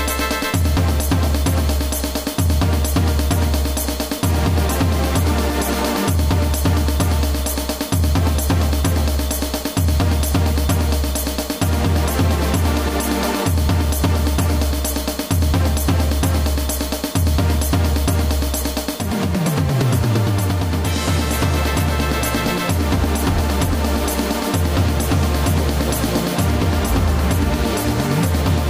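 Nothing here trips any alarms, so there's no technical fault to point to anywhere along the way.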